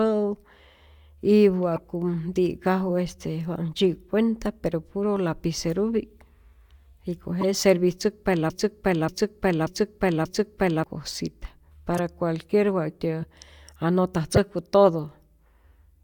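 Bits in the compressed stream were damaged and the decoder played the bad data as corrupt frames, so wrong gains and misread codes throw energy to the wrong frequencies. At 1.76 to 1.78 s, a couple of frames long and just before "ti'kaju este wa", this comes out as a short chirp cutting across the speech. A single frame hit at 7.41 to 7.44 s gives a brief blip.

From 8.50 to 10.84 s the stream most likely stalled and the player kept resending the last fragment it held, producing a broken-record loop. A 0.58 s piece of speech repeats exactly, back to back, four times, and whatever should have been heard in those seconds is lost.

The corrupt frame decoding returns at 11.94 to 11.99 s, where a few damaged frames in a row make a longer squeaky burst of noise. Single frames at 13.22 to 13.24 s and 14.36 to 14.38 s each add one more short blip.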